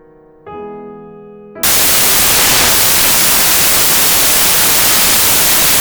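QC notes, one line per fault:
1.63 to 5.81 s, samples built from the wrong bytes: from 1.63 s to the end the music is replaced by loud, harsh broadband noise. Each sample's bytes are combined out of order, so the rapidly changing low bits dominate every value and the signal becomes broadband noise.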